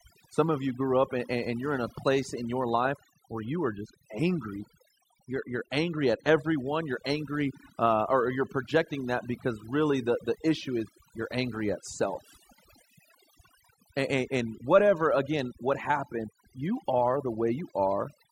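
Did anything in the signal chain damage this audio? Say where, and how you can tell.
Yes. Overdone noise removal runs through the whole speech clip, introduced at the processing stage where a noise suppressor was applied far too aggressively. Between phrases the background collapses to near silence scattered with twinkling specks. The suppressor pulls individual frequency bands down or shuts them off whenever their level sits close to its noise estimate, so low-level parts of the voice are stripped out along with the noise.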